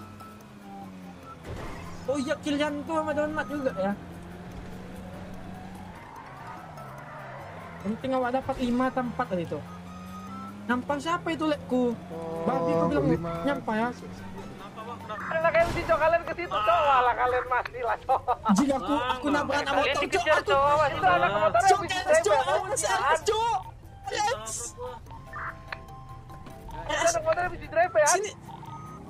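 No technical faults can be heard anywhere in this audio.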